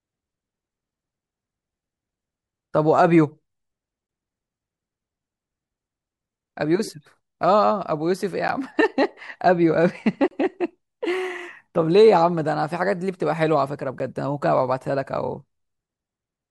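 Blocks of digital silence at 4.07–4.09, 8.48, 10.28–10.31 and 13.99 s: the speech drops abruptly to silence for 10 to 30 ms, likely from output buffers not filled in time. Each gap is heard as a tick or brief hole.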